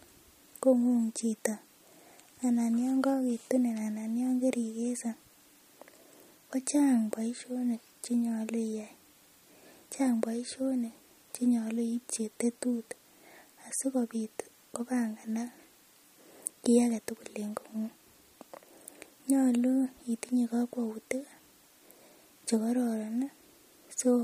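Throughout this speech recording the sound has a watery, swirling quality, with metallic chirps on s sounds and softened, smeared onsets, and nothing survives above 15.3 kHz. The likely cause is MP3 compression at a low bitrate, consistent with something near 46 kbps. Short of bits, the encoder has cut the treble at a fixed frequency and discarded weaker frequency components, which flicker on and off from frame to frame.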